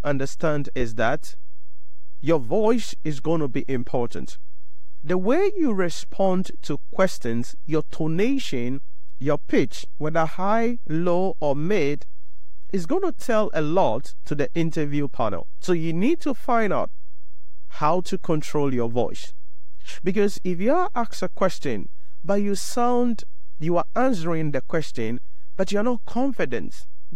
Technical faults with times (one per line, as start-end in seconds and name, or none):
0.00-27.15 DC offset